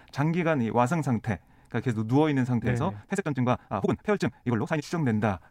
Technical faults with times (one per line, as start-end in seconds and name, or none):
2.55-4.85 time-stretched section